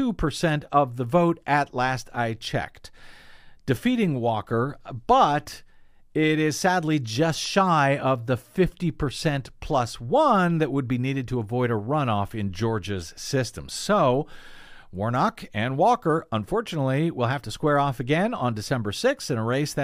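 Nothing goes wrong anywhere in this recording of speech; there's no moment where a technical fault breaks in.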